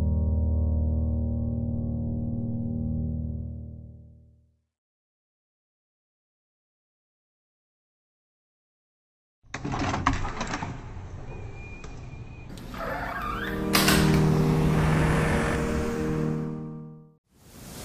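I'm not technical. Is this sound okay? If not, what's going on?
No: section at the wrong speed. Until 12.5 s it was likely played at half speed, so the sound drags slowly and sits much deeper.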